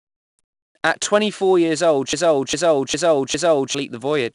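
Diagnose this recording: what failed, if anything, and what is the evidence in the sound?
The codec stage failed. The speech was stored with 4-bit ADPCM compression, and the coarse step-from-prediction coding leaves a gritty hiss that rises and falls with every loud syllable. Nothing is present above 10.6 kHz, which points to a reduced sample rate.

A broken-record loop follows "twenty four years old", most likely from a stalled player or stream resending its last buffered fragment. From 2.13 to 3.75 s, a 404 ms piece repeats four times back to back, and the speech that belonged there is lost.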